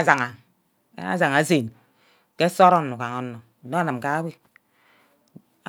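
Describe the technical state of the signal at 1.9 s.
At 1.9 s the signal is intact, with no audible technical fault at that point in the speech.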